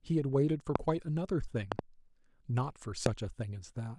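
Four loud pops sit on top of the speech, which continues underneath each one. The first, at 0.76 to 0.78 s, is a single sharp hit about 25 dB above the speech. At 1.72 to 1.81 s two pops follow in quick succession, about 15 dB above it. A final single pop at 3.06 to 3.08 s peaks about 20 dB above. The likely cause is a sudden voltage step or pulse from a plug, switch, static discharge or driver glitch.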